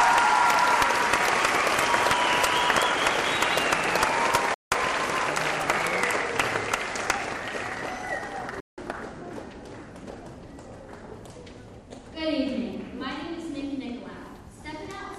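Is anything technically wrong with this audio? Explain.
Yes. At 4.54 to 4.72 s and again at 8.60 to 8.78 s there is a Bluetooth dropout, likely from wireless packets arriving too late and being discarded, which fits roughly a dozen lost packets each time. The sound cuts to silence for about 174 ms, then resumes further along, as though it had kept playing.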